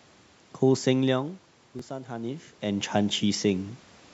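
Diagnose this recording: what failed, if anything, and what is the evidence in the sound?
The speech and the room noise behind it swell together, slowly, from 1.11 s to 3.73 s. This is automatic gain rising, in the call processing stage. The level reaching the microphone fell by about 13 dB, as the talker moved away around 1 s and again around 2 s. The automatic gain control read the input as too quiet and raised its gain by about 4 dB over more than two seconds, lifting the background along with the voice.

At 1.79 to 1.82 s a brief slice of roughly 20 ms plays twice, a short stutter, and then the speech picks up further on, as if time had kept running. This is a Bluetooth stutter on the wireless link. Audio data arrived late or not at all, and the receiver replayed its last buffer until fresh data came. One repeat of about 20 ms fits a single lost packet, and the missing audio is skipped, not recovered.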